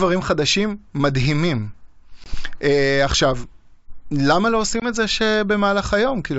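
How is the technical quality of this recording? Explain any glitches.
Two glitches break up the wideband speech, whose clarity up to about 7 kHz fits G.722 at 64 kbit/s. Packet loss on an ADPCM call hits at 2.24–2.35 s and 4.80–4.86 s. Each time, 20 ms of audio, about one packet, is replaced by a hard-edged silence. The decoder's adaptive predictor and step size then no longer match the sender's, so the speech comes back slightly distorted and takes some tens of milliseconds to settle.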